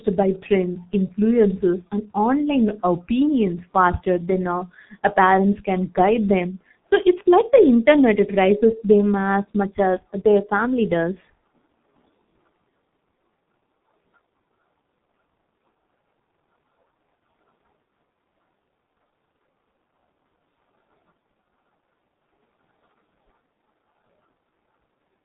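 From start to finish the speech carries heavy G.723.1 codec damage. Nothing reaches above 3.8 kHz, so it sounds muffled, and the slow 30 ms frame updates smear consonants into a hoarse, blurred texture, which fits a bitrate near 6.3 kbit/s.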